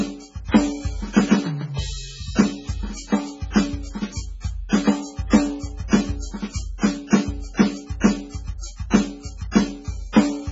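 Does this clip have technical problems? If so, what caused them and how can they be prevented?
Yes. Throughout, the music sounds watery and swirling, with smeared attacks and nothing above 7.6 kHz. That is likely heavy MP3 compression: short of bits, the encoder cuts the treble and lets weak frequency lines flicker on and off between frames, which fits a bitrate near 16 kbps. Encoding at a much higher bitrate, or keeping a lossless copy, prevents it.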